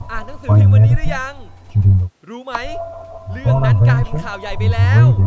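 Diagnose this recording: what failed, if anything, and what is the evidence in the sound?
No fault found in this recording.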